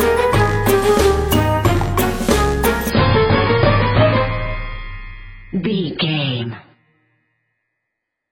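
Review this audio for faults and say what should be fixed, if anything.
At 2.90 s the stream drops to a lower bitrate and stays there to the end. There is no gap. The treble suddenly vanishes above 5 kHz and codec artefacts rise. That fits a switch from about 96 to about 16 kbit/s AAC. To prevent this, buffer more ahead or set a higher bitrate floor.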